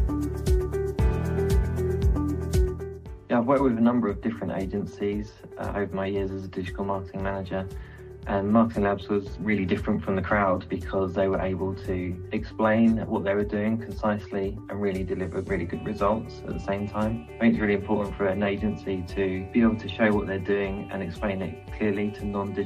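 No technical faults can be heard anywhere in the recording.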